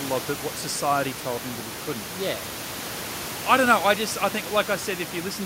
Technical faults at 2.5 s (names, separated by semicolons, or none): none